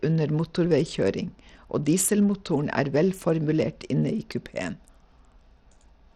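From start to finish the speech carries the marks of a link that is most likely squeezing it through Bluetooth SBC compression with too small a bit pool, which fits a rate of roughly 80 kbps. With so few bits shared across the coder's sub-bands, the upper bands are starved and the rest are quantised coarsely. The damage is plainly audible: the treble thins and flickers in and out, and a gritty, grainy haze with aliased edges clings to the speech.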